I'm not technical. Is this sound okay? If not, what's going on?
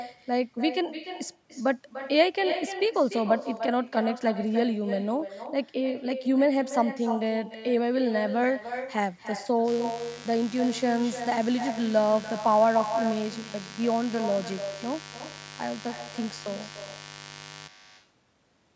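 No. Echo with no canceller runs through the whole recording: the far end's loudspeaker was picked up by its own microphone and sent back, so every phrase is followed about a third of a second later by a fainter, hollower copy.

Mains buzz appears from 9.68 to 17.68 s. Electrical interference from the 50 Hz power supply leaked into the audio, probably through faulty wiring or a noisy device, adding a steady, harsh buzz underneath the speech.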